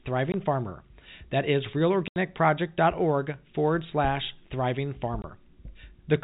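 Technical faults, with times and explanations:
0.32–0.34 s, 2.08–2.16 s and 5.22–5.24 s (just after "forward slash thriving"), packet loss filled with silence: the speech drops out for 20, 80 and 20 ms. Each gap is a whole multiple of a 20 ms packet, with hard edges, heard through the narrowband G.711 telephone sound.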